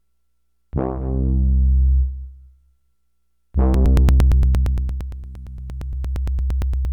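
An everyday sound recording that picks up a steady train of ticks from 3.74 s to 6.85 s, one every 115 ms, around thirty in all. These are periodic USB or driver dropouts: a background task stalls the audio path at a fixed interval, skipping about 10 ms of audio each time.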